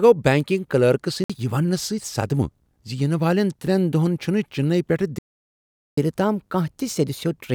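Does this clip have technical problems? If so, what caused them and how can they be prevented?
Yes. At 1.24 s the speech cuts to about 56 ms of silence, then resumes at 1.30 s, likely a Bluetooth stall in which delayed wireless packets let the headphone buffer run dry. Its brevity distinguishes it from a player-side dropout. Keeping the phone close and away from crowded 2.4 GHz traffic prevents it.

After "چنئی پیٹھہٕ", the speech stops at 5.19 s and stays silent for 789 ms until 5.97 s, likely a playback stall in which the player ran out of data or its thread was blocked. It lasts far longer than the wireless gap and is followed by rushed catch-up. A larger playback buffer and a player thread that nothing else can block prevent it.

From 5.97 s to the end, the speech plays at 1.1 times normal speed and roughly a semitone and a half higher as the player works through its backlog by resampling. 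That is catch-up at higher speed. The shared rise in pitch and tempo sets it apart from time-stretching, which keeps pitch steady. Skipping the backlog or using pitch-preserving time-stretching avoids the audible shift.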